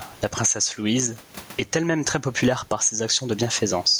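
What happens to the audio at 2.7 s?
At 2.7 s the gain pumping that runs through the whole speech clip is still active: the gain swings by around 20 dB, pulled down on each loud syllable so loud and soft parts sit closer in level, likely from gain set far too high with a fast limiter pulling it back. The room noise, about 38 dB below the speech, is part of the recording rather than a fault.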